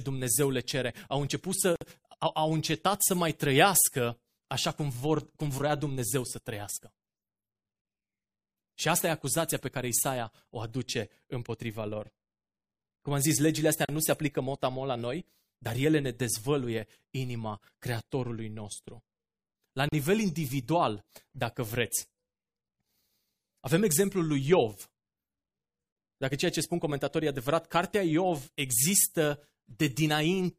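At 1.76 s, before "au au încetat să", at 13.85 s between "am zis legile astea" and "nu se aplică motamo", and at 19.89 s before "individual dacă vreți", the speech stops for about 55, 37 and 37 ms. Each is a gap at a join of encoded pieces, which fits pieces about 6 s long. Encoder start delay and last-frame padding were left in at each seam. Unlike a dropout, nothing is lost: the sound resumes exactly where it broke off.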